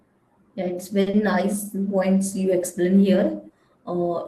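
A speech recording carries two network faults close together, just after the one-second mark. The first is a short stall from a late packet, from 1.01 to 1.08 s. A packet did not arrive on time and the jitter buffer ran dry. The receiver held the last sound for about 50 ms until the packet turned up. Then playback resumed from the same point. Nothing is lost, but the sound drags, and everything after it runs about 50 ms later. Right after comes a short concealed packet loss, from 1.10 to 1.15 s. Here about 40 ms of audio never reached the decoder in time. The receiver covered roughly 30 ms of the gap by extending the preceding sound, then blended back into real audio. The result is a brief smear or wobble. Any short consonant in that span may be gone.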